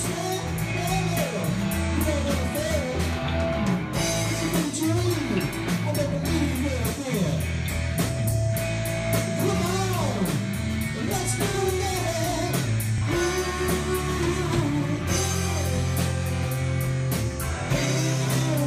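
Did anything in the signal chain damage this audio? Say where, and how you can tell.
Yes, there's Bluetooth stutter on the wireless link, at 12.98 to 13.02 s and again at 17.67 to 17.71 s. Each is a repeat of a 23 ms slice, which fits one lost packet. The receiver replayed its last buffer, then the sound jumped ahead as if it had kept playing.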